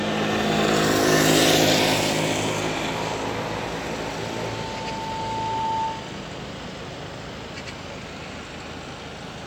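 Everyday sound, with a loudspeaker feedback squeal from 3.91 to 6.21 s: a single 890 Hz tone swells over roughly two seconds to about the level of the sound itself, as the microphone–loudspeaker loop exceeds unity gain.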